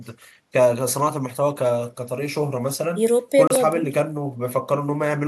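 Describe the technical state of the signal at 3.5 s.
A Bluetooth dropout sits at 3.47 to 3.50 s, where the speech cuts to silence for about 29 ms and then returns. The sound picks up further along, as though it had kept playing through the gap. The likely cause is wireless packets arriving too late at the headphones and being discarded, so nothing played until valid data came back. A hole of that length fits roughly two lost packets.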